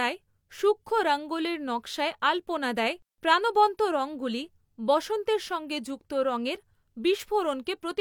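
No technical faults can be heard anywhere in this speech recording.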